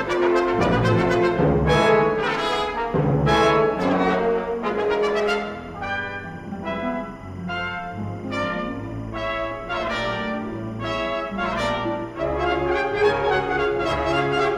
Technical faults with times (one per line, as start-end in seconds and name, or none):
0.00-14.58 timecode bleed